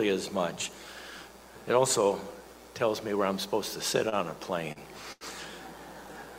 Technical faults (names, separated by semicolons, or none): short stall from a late packet